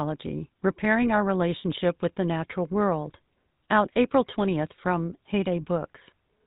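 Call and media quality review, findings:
GSM full-rate codec damage, throughout. Buzzy, gravelly roughness on the speech, plainly audible; nothing above 4 kHz. Pulse-excited vocal-tract model keeps only every third excitation sample, so the voice turns rasping and dull. Consistent with 13 kbps GSM full-rate coding.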